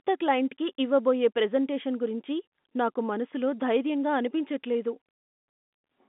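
No technical faults can be heard in the speech. The G.711 telephone coding is working normally: the sound is confined to a line band of about 200 Hz to 3.6 kHz, with nothing above 3.8 kHz, and any coding noise from the format is faint at most.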